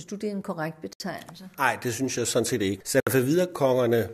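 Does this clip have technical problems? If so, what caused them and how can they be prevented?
Yes. The speech drops out twice into short silences, from 0.93 to 1.00 s (about 69 ms) and from 3.00 to 3.07 s (about 67 ms), each with smeared edges before the sound picks up where it stopped. This is a gap at a join of encoded pieces. The audio appears to have been encoded in separate pieces about 2 s long and joined untrimmed, so each encoder's start-up delay and final-frame padding remain as silence. To prevent it, trim the encoder delay and padding at every join, or encode the audio as one continuous stream.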